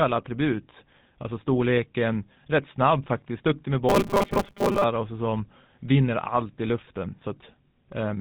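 All the way through, the speech has that gravelly GSM full-rate codec buzz, with nothing above 4 kHz, which fits the old 13 kbps coder's pulse-driven vocal-tract model. From 3.89 to 4.84 s it goes robotic, a rigid 200 Hz metallic buzz, likely from repeated short buffers: a 5 ms chunk replaying while about half the audio gets skipped.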